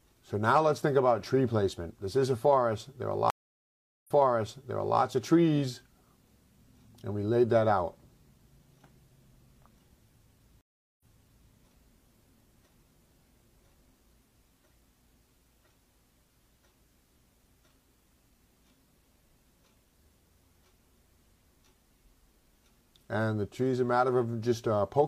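The audio drops out twice, for 760 ms at 3.3 s and 389 ms at 10.61 s, then resumes about 0.93 s and 0.51 s earlier: a stream reconnect restarting the decoder mid-stream.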